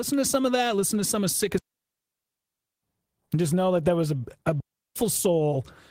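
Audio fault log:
1.58–2.83 s and 4.60–4.96 s, digital wireless dropout: the speech cuts to near silence twice, first for about 1.25 s and then for about 0.36 s right after "there was a a". Each is a clean hole with a very quick fade and no crackle or noise burst either side. That's the receiver losing too much of the digital link and muting outright rather than passing corrupted data through.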